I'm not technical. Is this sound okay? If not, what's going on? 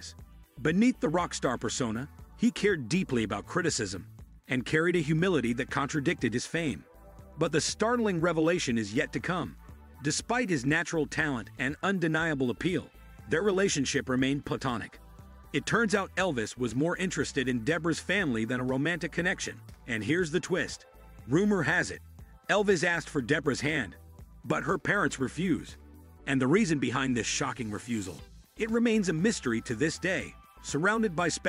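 Yes, this sound is okay, and nothing is going on that needs fixing.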